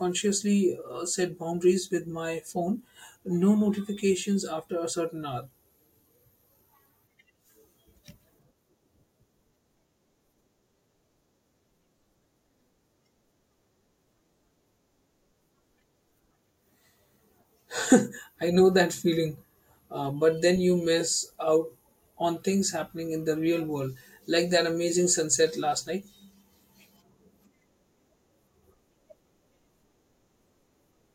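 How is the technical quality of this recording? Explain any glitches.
No audible technical faults.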